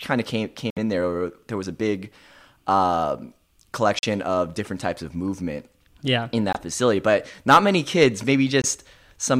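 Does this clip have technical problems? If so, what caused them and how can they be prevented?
Yes. Bluetooth dropouts occur at 0.70, 3.99, 6.53 and 8.62 s: short silent holes, likely from late wireless packets being discarded, after which the speech resumes further along. Prevention: keep the headphones close to the source with a clear path and reduce nearby 2.4 GHz traffic.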